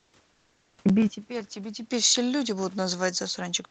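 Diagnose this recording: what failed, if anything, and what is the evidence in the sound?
Comfort noise in place of the background: from 0.0 to 0.13 s and 0.32 to 0.77 s, the room's background turns smooth and featureless, about 2 dB quieter. This is likely Opus discontinuous transmission at the codec stage, with the receiver synthesising shaped noise while the sender pauses.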